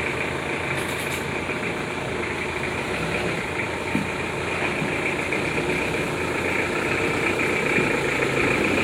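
Everyday sounds, with no technical faults audible anywhere.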